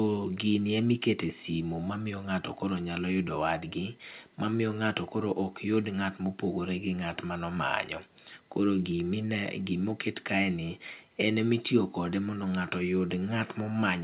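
Nothing's wrong with this speech recording: it came over an ordinary call line, and the top end stopping at about 4 kHz is just what a narrowband telephone codec like G.711 A-law does.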